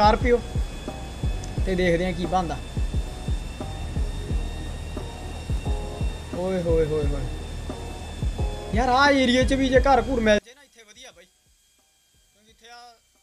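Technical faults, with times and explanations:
10.39–13.23 s: one channel inverted. The sound drops by about 31 dB and turns faint, likely because one stereo channel's polarity is reversed, so shared content cancels in mono. The waveform shrinks to a sliver; the spectrogram darkens.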